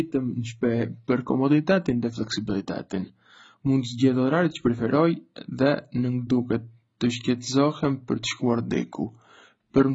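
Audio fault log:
throughout: AAC compression, heavy. The speech sounds dull and smeared, with a watery, warbling edge on sustained sounds and fizzy sibilants. Nothing is present above about 7.6 kHz, which points to a very low bitrate, likely AAC-LC around 16 kbps, where the encoder drops the top band and starves the rest of bits. On a spectrogram there is a hard ceiling near 7.6 kHz and patchy, blocky holes and speckle beneath it; the waveform shows little sign.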